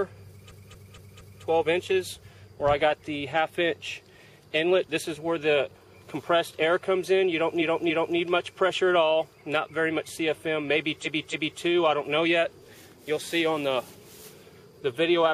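A stutter starts at 0.47 s, where a short block of about 232 ms plays five times in a row until 1.40 s. The same stutter returns at 7.57 to 8.13 s and 11.01 to 11.58 s, each time a block of about 279 ms played three times. These are repeated frames: a run of compressed frames was sent again, adding 0.93 s and 0.56 s each time.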